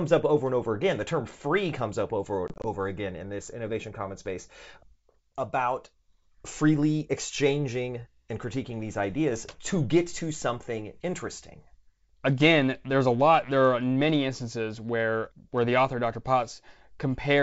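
Around 2.48 to 2.66 s there's packet loss on the ADPCM call. About 80 ms goes missing in short holes of up to 20 ms each, replaced by silence. The G.722 decoder's predictor loses track, so the speech returns slightly off before settling.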